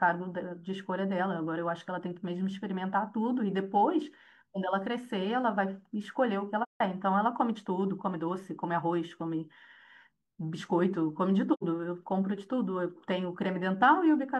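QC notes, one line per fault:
6.62–6.81 s and 11.53–11.63 s, AAC frame loss with muting: lost frames were zeroed by the decoder, leaving gaps of about 170 ms and 85 ms, consistent with four and two dropped frames. Overlapping windows fade the speech out and back in, so each gap has soft edges.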